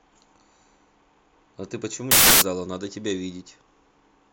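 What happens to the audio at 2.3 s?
At 2.3 s the speech is replaced by loud, harsh broadband noise from samples built from the wrong bytes, lasting 2.11 to 2.42 s. Misassembled bytes push the rapidly changing low bits into the high-order position.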